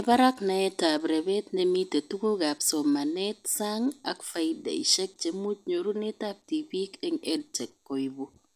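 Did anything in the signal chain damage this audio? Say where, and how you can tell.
No, nothing in this speech recording stood out as damage from any stage of the signal chain on listening.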